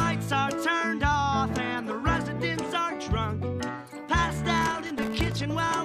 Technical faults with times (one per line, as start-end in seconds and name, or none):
4.58-5.42 processor overload crackle